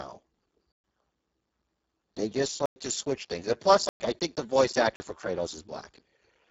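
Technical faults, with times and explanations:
Throughout: Speex codec. Heavy low-bitrate coding, around 5.8 kbps, leaves speech hoarse and noisy. Nothing survives above 7.7 kHz.
0.72 s, 2.66 s, 3.89 s, 4.96 s: block of digital silence. Gaps of 120, 103, 111 and 40 ms cut the sound out abruptly. The second comes just before "to switch things and", the third between "switch things and plus" and "I think the voice", the fourth just after "I think the voice". The output buffer was likely not filled in time.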